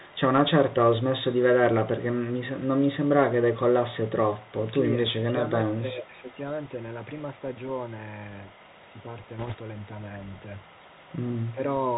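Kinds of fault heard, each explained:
Bluetooth CVSD headset codec: narrowband one-bit delta coding, nothing above 4 kHz, scratchy s sounds and granular hiss throughout, unlike brief error bursts.
Speech suppressed in double talk: the voice dips about 10 to 15 dB in short pieces, likely an echo canceller muting during overlap, level drops rather than added noise.
Bit errors on a Bluetooth voice link: a brief rushing crackle near 9.39 to 9.55 s, without loud clicks, which sets it apart from packet loss dropouts.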